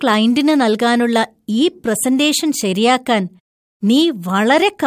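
Nothing in this short bit of speech jumps out as a technical fault; there's simply nothing here to flag.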